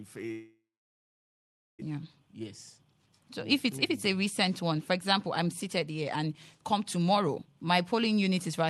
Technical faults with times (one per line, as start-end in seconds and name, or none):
0.31-1.83 long network dropout
1.91-3.29 jitter buffer speed-up
3.69-7.53 jitter buffer speed-up